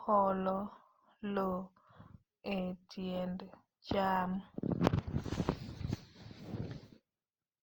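Speech throughout with generation loss: swirly, hollow, smeared attacks, content to 20.2 kHz, likely from about five Opus passes near 48 kbit/s.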